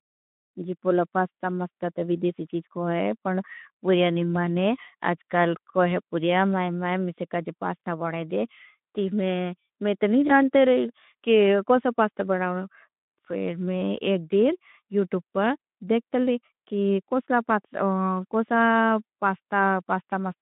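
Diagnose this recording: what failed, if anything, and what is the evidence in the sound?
Network stage: VoIP packet loss concealed by the speech codec at 7.8 s, 10.27–10.32 s and 15.6 s. Each is a brief buzzy or noisy smear from the Speex decoder extrapolating over what sounds like one lost 20 ms frame.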